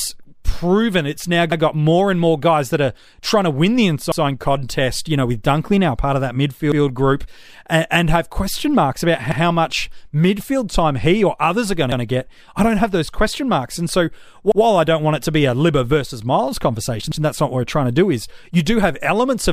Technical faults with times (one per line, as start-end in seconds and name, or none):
1.52-1.62 overlapping chunks
4.12-4.22 overlapping chunks
6.72-6.82 overlapping chunks
9.32-9.42 overlapping chunks
11.92-12.02 overlapping chunks
14.52-14.62 overlapping chunks
17.12-17.22 overlapping chunks